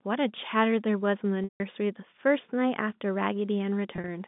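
At 1.44 to 1.60 s, packet loss with pitch repetition: about 160 ms of audio goes missing, and the receiver bridges the gap by replaying the last pitch period. This is heard as a buzzy, held tone that fades to silence rather than a clean dropout. At 3.96 to 4.08 s, scattered losses totalling 80 ms, each run at most 40 ms, cause brief buzzy stutters instead of a fade, all within the telephone-band G.711 sound.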